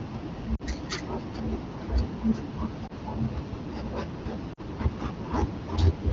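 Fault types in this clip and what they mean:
Lost AMR speech frames: at 0.56, 2.87 and 4.53 s, corrupted frames made the decoder reuse earlier settings with falling gain, causing brief 20–40 ms dips.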